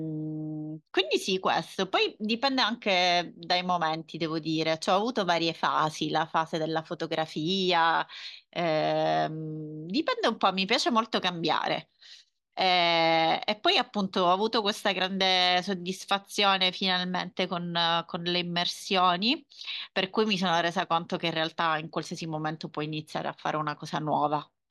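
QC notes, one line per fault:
Nothing to flag here; the speech comes across with no technical faults heard anywhere in the clip.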